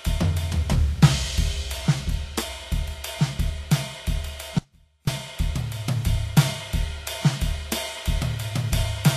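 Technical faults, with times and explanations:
Throughout: Vorbis compression. The music has no content above 14.2 kHz, and codec damage is plainly audible across the clip. This sound likely comes from Vorbis coding at a low rate, which fits a bitrate of around 35 kbps. Such a coder keeps a smooth outline of the spectrum but spends very few bits on fine detail. It trims the top band and rounds the upper detail so coarsely that it turns to noise, roughening tones and softening attacks.
4.59 to 5.07 s: Audio dropout to a faint residue. The music cuts out abruptly for about 0.49 s and then returns just as suddenly. The gap is not silent. A faint sound remains, roughly 30 dB below the normal level. This is likely a loss of the wanted signal while the path after the break stayed live. That is why a low residue carries on through the gap instead of a clean pause or a fade.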